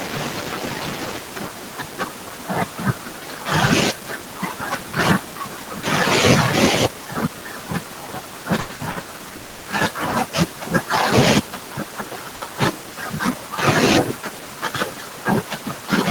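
Between 8.57 and 9.10 s the speech shows repeated stalls (stutter). Packets kept arriving behind schedule, so the jitter buffer ran dry five times in just over half a second. Each time the receiver extended the last sound to bridge the wait, 270 ms in total, with the longest single gap 90 ms. That fill makes up roughly half of the stretch. Nothing is lost, but the speech drags and stumbles through this section.

From 9.36 to 9.67 s there is a call audio freeze. The speech halts and the last sound is held as a fading buzz or hiss for 290 ms. The speech never drops to silence, and it then resumes from exactly where it stopped. The likely cause is a hold-up in packet delivery that emptied the jitter buffer, forcing the receiver to invent sound until data arrived. No speech is missing; instead a 290 ms gap has been inserted, and the delay grows by the same amount.

At 12.35 to 12.43 s there is a short stall from a late packet. 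A single packet missed its playout time, and the receiver stretched the preceding sound by 60 ms until it turned up, then carried on without skipping anything. The result is one sound held slightly too long, with a faint buzzy or dipped quality, and a 60 ms increase in delay.

From 15.04 to 15.50 s a jitter buffer speed-up occurs. The buffer had built up more audio than its target, so the receiver trimmed short pitch-period-sized pieces in quick succession, removing about 50 ms in total. Pitch stays the same, but the speech plays about 9% fast and sounds hurried over this half second.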